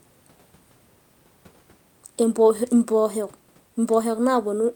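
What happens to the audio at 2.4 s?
At 2.4 s the speech is intact, with only the room's own background noise sitting about 39 dB below it.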